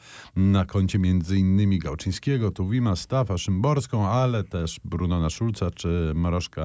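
Nothing in this speech recording stands out as a technical fault; it just runs along without any glitch catching the ear.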